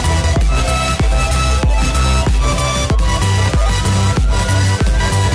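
Nothing audible points to a technical fault anywhere in the audio.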